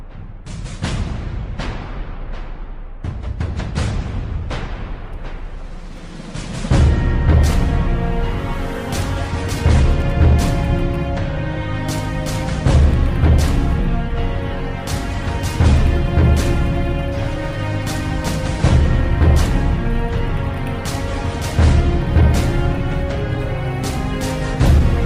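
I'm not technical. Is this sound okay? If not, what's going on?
No, not quite. Clock drift between sender and receiver runs through the whole clip. The device that sent the sound kept time slightly faster than the device playing it, by roughly four percent. Sound therefore arrived a little quicker than it could be played, and the small holding area that smooths out delivery kept overfilling. To keep up, the player had to trim tiny pieces again and again, at uneven intervals, which is where the faint hiccups come from.

Repeated timing corrections are clearest from 0.02 to 10.49 s and again from 22.21 to 24.95 s. In both stretches the player snips out short slivers to catch up with the faster sender, so the sound runs at about 102 percent of its proper pace. Every edit goes the same way, trimming rather than repeating, but they land unevenly. Each one is tiny, and the pace is slightly rushed.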